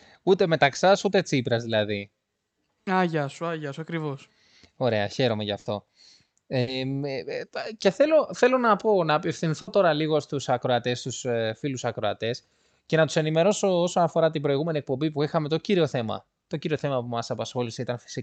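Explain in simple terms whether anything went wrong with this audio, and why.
Burst of packet loss, at 5.59 s, 6.61 s and 9.61 s. This speech travelled over a call connection, and at each of these moments a few packets of audio failed to arrive in time. The receiving end covered each hole by stretching the last sound for about 60 ms while fading it, which you hear as a brief buzz or hiss. Then the speech picks up again, but about 60 ms of it is simply gone.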